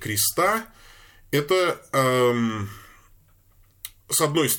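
No technical faults are audible.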